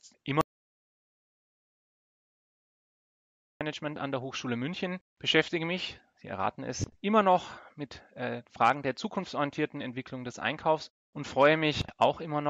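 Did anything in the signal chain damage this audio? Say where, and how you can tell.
Yes. There is an audio dropout to silence from 0.41 s to 3.61 s, about 3.2 s in all. The sound stops abruptly mid-flow and resumes just as abruptly, and the gap between is silent with no room tone or noise floor, so nothing from that stretch survives. The likely cause is a loss of input upstream of the recorder, such as a disconnected device, dropped link or momentary mute, while the recorder kept writing silence.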